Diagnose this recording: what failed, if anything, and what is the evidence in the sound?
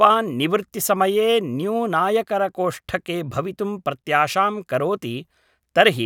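Listening through the recording, nothing stood out that would point to a failure at any stage of the chain.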